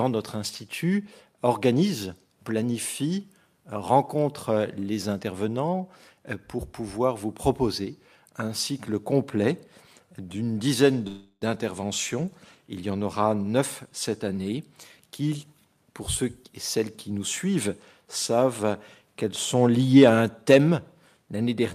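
At about 11.07 s the sound gives way to a smeared buzzy tail that keeps the last moment going and fades out over roughly a third of a second, then there's a brief gap of silence, about 30 ms, before things pick up again at 11.43 s with around 340 ms simply gone. That's the signature of a long network dropout: the stream most likely stopped arriving, and the receiver padded the hole until it gave up.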